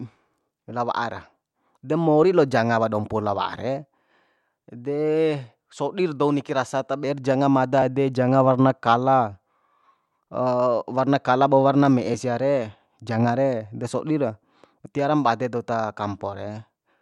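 At 7.82 s the speech jumps, the mark of a dropped buffer (overrun). The recording software likely failed to read its samples before the hardware overwrote them, so roughly a hundredth of a second of speech vanished and the audio on either side was joined directly. What sets it apart from a dropout is that no silent gap opens: the sound simply skips forward.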